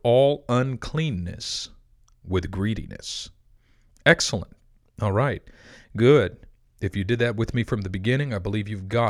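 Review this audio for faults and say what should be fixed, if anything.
No faults are audible, so nothing needs fixing.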